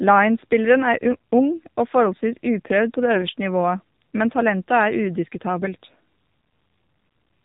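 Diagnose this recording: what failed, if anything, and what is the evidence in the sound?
The codec stage is at fault: the speech went through the AMR narrowband mobile codec. Nothing above 4 kHz survives, and the voice sounds buzzy and synthetic throughout. That fits a low AMR-NB mode around 7.4 kbps, where a few pulses per subframe drive a vocal-tract model.

A network-stage failure adds AMR bit errors from 1.01 to 1.11 s. Less-protected frame bits arrived flipped at a rate of a couple of percent, which fits about five 20 ms frames. Misplaced excitation pulses and skewed gain and spectral values make the voice briefly hoarse and gargly while keeping its pitch and level.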